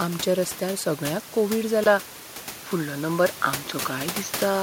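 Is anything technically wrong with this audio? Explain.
Yes. From 1.84 s to the end of the speech, the sound changes in a way that points to an input switched to a poorer device, most likely a change of microphone or a headset moving to its call profile mid-recording. A gap of about 20 ms of silence marks the switch, after which the audio turns duller, with a narrower band. The level shifts by around 5 dB, and a new, faint noise floor appears roughly 40 dB below the speech, distinct from the room noise heard earlier at about 16 dB below. On a spectrogram, the upper band cuts off abruptly at the switch. The waveform shows a brief flat gap followed by a step in amplitude.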